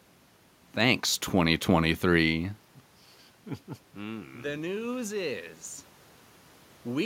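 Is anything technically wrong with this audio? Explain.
Yes. From 3.93 to 5.5 s there is automatic gain rising. The input dropped by about 13 dB, so the gain control raised its gain by about 5 dB over a second and a half. The room noise swells along with the speech, which tells it apart from the talker moving near 2 s, where only the voice level shifts.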